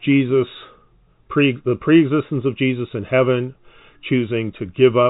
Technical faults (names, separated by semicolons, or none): none